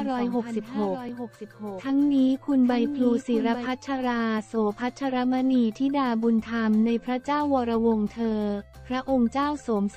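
From the very start, a doubled audio track is already running. A second copy of the sound trails the original by roughly a second. It sits about 10 dB below the main signal. It is full-band and dry, with no decay or room colour. It stops abruptly at 3.66 s. The cause is likely a second capture through a slower path, or an edit that left two copies out of step.

At 1.09 s there is a block of digital silence. The audio drops to zeros for 1.45 ms, then returns. There is no fade at either edge. The hole is too short to hear as a gap, so it comes across as a single sharp tick. Its length fits a 64-sample block. The program probably failed to fill one small output buffer in time.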